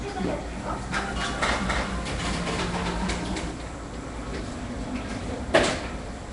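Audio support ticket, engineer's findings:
Audio path likely passed through Nellymoser compression, consistent with a stream around 44 kbps. Fixed-bit block coding starves weak bands, which get noise fill instead of signal. Result throughout: rough, hissy halo and smeared, underwater character on the sound, plainly audible, with nothing above 10.6 kHz.

Doubled audio track from 0.95 s to 3.51 s, likely from a second capture path or edit leaving an offset copy mixed in. Full-band duplicate trails by about 300 ms at about 5 dB down, with no decay or room colour. It starts and stops abruptly, giving a hard, slapback-like repeat.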